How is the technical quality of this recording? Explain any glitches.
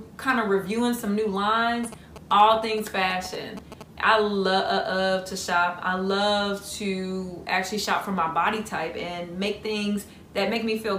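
The recording has one clear fault: GSM signalling bursts from 1.84 s to 3.83 s. A 2G phone close by was exchanging short control transmissions with its network. The audio circuitry picked up this radio energy and rectified it into the signal. The result is a galloping dit-dit-dit of brief buzzes. The buzz repeats at about 217 Hz, the GSM frame rate. It sits roughly 15 dB below the main sound.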